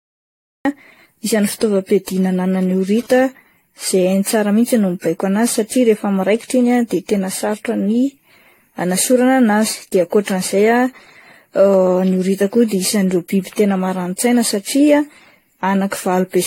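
A speech recording that opens with digital silence until 0.65 s, where the sound begins abruptly in the middle of an utterance with no natural attack or fade-in. This is a cut-off start: capture or the stream began late, so the opening portion of the sound was simply never recorded and the waveform jumps straight from zero into ongoing signal. From 2.98 s to 3.22 s a hard, raspy buzz cuts in at about 22 dB below the speech, pitched at 217 Hz and rich in harmonics, with no relation to what is being said. That is GSM phone buzz. A nearby 2G handset transmitting in bursts 217 times a second induced radio pulses that the audio circuitry rectified into audible sound. Here it appears only as a short burst, which fits a phone doing a data transfer rather than holding a call. Throughout the clip the sound is swirly, smeared and hollow, transients are blurred, and nothing is present above 16.5 kHz. 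That degradation is worse than a single encode at this quality should give, and it fits AAC-LC at 64 kbit/s applied repeatedly, perhaps around seven times. The likely cause is generation loss: every decode and re-encode quantises the audio again on a shifted frame grid, so coding noise and spectral holes build up with each pass.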